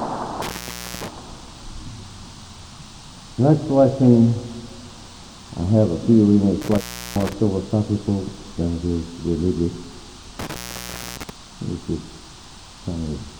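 Intermittent contact cuts the audio three times, at 0.42–1.08 s, 6.62–7.33 s and 10.39–11.30 s, opening for about 0.53, 0.35 and 0.61 s. A loose connection breaks the line, so the sound drops to faint hiss with crackle at each edge. The waveform shows near-flat gaps; the spectrogram shows broadband clicks bracketing them.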